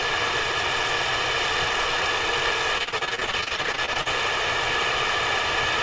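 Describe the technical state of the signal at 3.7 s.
Choppy, robotic sound: repeated packet loss from 2.78 to 4.07 s, with many short dropouts, each bridged by repeating the last sound, covering about a third of that stretch.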